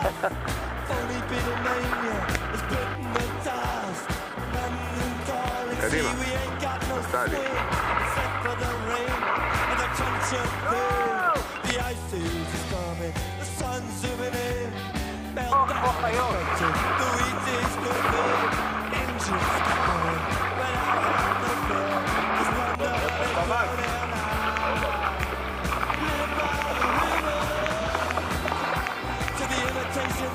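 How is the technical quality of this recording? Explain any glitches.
No glitches or technical faults are audible anywhere in the recording, so there is nothing to explain.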